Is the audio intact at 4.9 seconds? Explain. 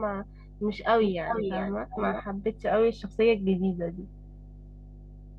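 No, at 4.9 seconds there's mains hum, and it runs through the whole clip. A ground loop or nearby transformer is leaking the power line into the signal, so you hear a steady 50 Hz drone underneath the speech, sitting only about 10 dB below it.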